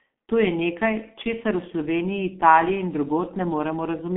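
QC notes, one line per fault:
throughout: G.723.1 codec. The speech is confined to a narrow telephone band of roughly 200 Hz to 3.4 kHz, with nothing above 3.8 kHz, so it sounds muffled and boxy. Codec damage is heavy. The coder works on long 30 ms frames and refreshes its model of the voice only slowly, which leaves a hoarse, rough texture and smears consonant onsets, consistent with a low bitrate of around 6.3 kbit/s.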